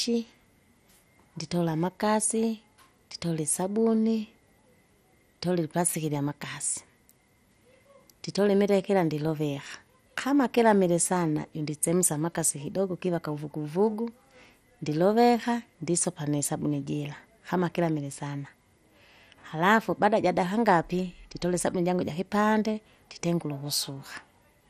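Speech sounding dull and gurgling throughout, with nothing above 14.3 kHz, likely from MP2 compression at a rate around 64 kbps, where starved upper sub-bands drop out.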